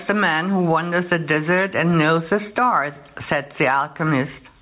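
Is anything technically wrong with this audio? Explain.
Yes, there's gain pumping all the way through the speech: the gain swings by around 15 dB, pulled down on each loud bit, most likely from too much mic gain feeding a fast limiter. The call path's band-limiting, with nothing above 4 kHz, fits a narrowband G.711 link.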